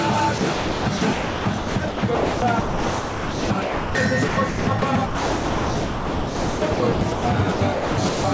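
From 0.38 to 3.95 s, 4.28 to 7.25 s and 7.52 to 8.24 s, the sound is chopped by the voice detector, likely at the sender. Sending gates on and off repeatedly, and about 2.55 s, 2.13 s and 0.48 s of each stretch are replaced by synthetic comfort noise. The result is choppy. Throughout, the call path's band limit at 8 kHz is audible, consistent with G.722.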